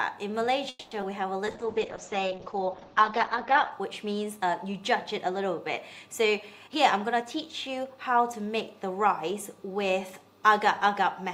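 Four network-related faults affect this call audio. From 0.69 to 0.93 s there is a call audio freeze: the last sound is stretched into a fading buzz for about 220 ms, ending in roughly 20 ms of silence, before the audio resumes exactly where it stopped. Nothing is lost, but the playout delay grows by 220 ms. The likely cause is packets held up in transit, which left the jitter buffer empty until they arrived. Shortly after, at 1.01 to 1.04 s, a short concealed packet loss produces a brief smear. About 40 ms of real audio never reached the decoder in time, and the receiver bridged the hole with only a few milliseconds of extrapolated sound before blending back in, so the delay shrinks by a few tens of milliseconds and a short element can drop out. From 1.48 to 3.78 s a call bitrate drop makes the sound rough and muffled. The top of the spectrum falls from 20 kHz to 8 kHz and stays at its worst for about 2.2 s, which fits the encoder being pushed from around 96 kbps down to about 8 kbps after the bandwidth estimate collapsed. 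Coarser coding adds a watery grain until the rate recovers. Finally, from 6.67 to 8.35 s a jitter buffer speed-up makes the audio run at about 113 % speed with unchanged pitch, so it sounds hurried. The receiver trimmed short pitch-period slices many times in a row, removing roughly a fifth of a second to pull an overfull buffer back toward its target delay.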